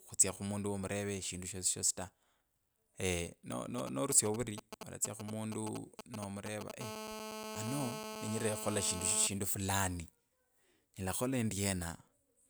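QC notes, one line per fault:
3.78–6.72 s, GSM signalling bursts: a 2G handset nearby sends only brief clusters of radio pulses while signalling. The audio circuitry rectifies them into a galloping dit-dit-dit of short 217 Hz buzzes, sitting only a few dB below the speech.
6.81–9.27 s, GSM phone buzz: the handset now transmits continuously as in a call, pulsing 217 times a second. Rectified by the audio path, this gives a steady, hard, raspy 217 Hz buzz rich in harmonics, about 7 dB below the speech and unrelated to it.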